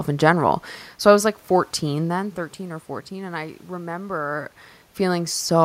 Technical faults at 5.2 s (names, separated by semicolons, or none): none